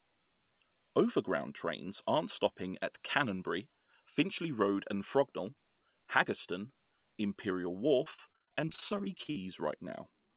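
From 8.04 to 9.42 s there is repeated packet loss, heard as a robotic sound. Short holes arrive one after another, the longest 44 ms. Each is filled by extending the last sound, so about a third of this stretch turns choppy, with pieces missing. Throughout, the call path passes nothing above 4 kHz, which fits a G.711 narrowband link.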